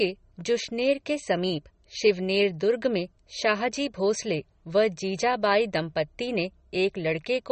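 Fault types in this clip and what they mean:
MP3 compression: Plainly audible codec damage runs through the whole speech clip, a watery, swirling texture with nothing above 8.4 kHz, so the top end ends abruptly. The likely cause is MP3 encoding at a low bitrate, which fits roughly 33 kbps: with so few bits the encoder drops weaker frequency lines, which flicker in and out from frame to frame, and it cuts the treble at a fixed frequency.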